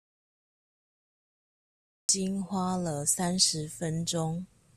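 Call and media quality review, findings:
Audio dropout to silence, 0.0 to 2.09 s, under way from the start. Silent gap, no room tone. Input likely lost at capture device or link; speech resumes abruptly.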